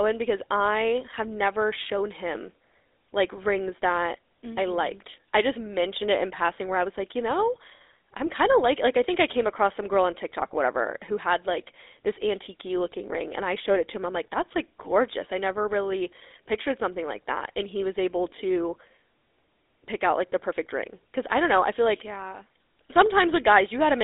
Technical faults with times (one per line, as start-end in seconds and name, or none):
0.00-24.04 GSM full-rate codec